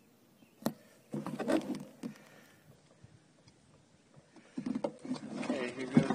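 At 2.75 s the audio switches abruptly, with no gap, to an adaptive stream at a lower bitrate, staying there to the end. The connection evidently forced a leaner encoding, consistent with a fall from about 96 to 32 kbit/s. Content above 9.7 kHz vanishes and codec artefacts thicken, unlike a plain filter.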